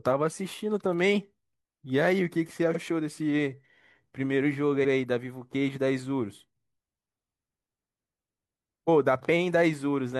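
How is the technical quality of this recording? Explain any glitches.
The speech has two stutters from repeated frames. At 2.71 s, about 43 ms of audio plays twice, which fits a single compressed frame being sent again. At 4.80 s, an 85 ms block repeats, likely two frames. Each repeat makes a brief hiccup and stretches the timing slightly.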